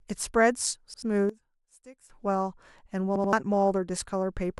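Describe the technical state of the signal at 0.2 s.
At 0.2 s the signal is intact, with no audible fault at that point in the speech.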